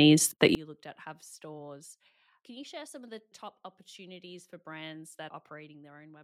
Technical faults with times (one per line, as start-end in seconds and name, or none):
0.55-6.24 one channel inverted